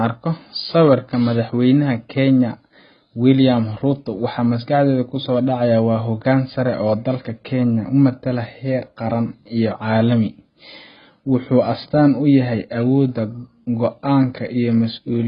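From start to end, the speech is dull and smeared, with nothing above 5 kHz. Sibilants sound fizzy and warbling. This is likely AAC compression, with heavy damage that fits a very low bitrate near 16 kbps. Starved bands are left hollow or filled with noise.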